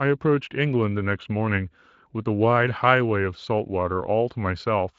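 The speech comes through a Speex codec path that is working as intended, and nothing in the recording stands out as a technical fault.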